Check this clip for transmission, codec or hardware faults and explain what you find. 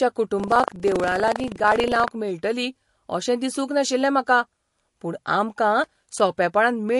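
Three faults are audible in this speech clip.

MP3 compression runs throughout: nothing remains above 11.3 kHz, and watery, swirling artefacts suggest a likely low-bitrate MP3 encode, around 48 kbps.

Buffer tearing runs from 0.36 to 2.11 s: writer and reader pointers cross each period, splicing in a small slice of audio about 70 ms old, producing a robotic 25 Hz buzz.

Loose connector crackle appears from 5.84 to 6.20 s: a contact rapidly making and breaking chops the signal, heard as an irregular burst of scratchy crackle.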